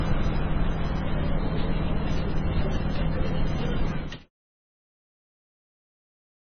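From start to finish the sound is dull and watery, with nothing above 6.5 kHz and a swirling, warbling quality as quiet detail flickers in and out. Transients are smeared and any sharp high content turns into metallic chirps. This is likely heavy MP3 compression at a very low bitrate, around 15 kbps. Starved of bits, the encoder cuts the treble above a fixed frequency and zeroes weak frequency lines that come and go between frames. The damage stays audible through the smooth fade-out from about 4 s to 4.3 s.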